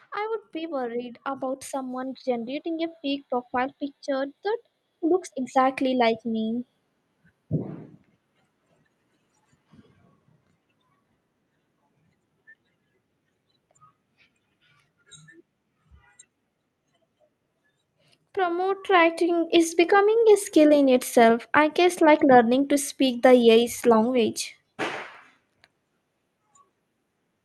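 From 0.14 to 6.65 s the speech and the background swell together by about 11 dB, and again from 18.34 to 20.06 s by about 4 dB: automatic gain rising, the control judging the input too quiet and gradually raising its gain.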